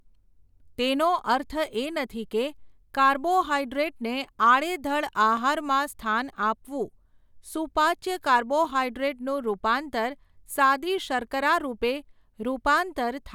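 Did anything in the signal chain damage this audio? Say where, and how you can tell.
No, nothing in the signal chain damaged this audio.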